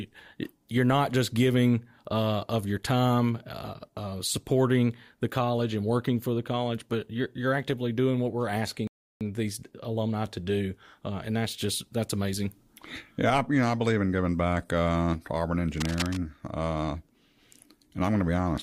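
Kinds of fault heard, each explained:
Rebuffering stall: at 8.87 s the speech drops to silence as playback runs out of data. It resumes at 9.21 s from exactly where it stopped, adding 0.33 s. A waveform shows a flat gap, and a spectrogram shows a clean, empty column.
Cable scratch noise: from 15.76 to 16.17 s, dense, ragged rustling sits over the speech at roughly 10 dB below it, likely from a worn cable or connector being moved. A spectrogram shows broadband vertical speckling, and the waveform gains spiky, irregular fuzz.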